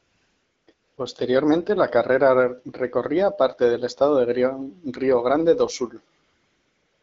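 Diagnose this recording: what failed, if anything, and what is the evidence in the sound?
AMR comfort noise, at the call-processing stage: from 0.00 to 0.67 s, 0.73 to 0.97 s and 6.23 s to the end, the real background becomes a steady, smooth hiss. The phone judged these stretches silent and stopped sending speech frames, so the receiver synthesised noise from a coarse level-and-spectrum description.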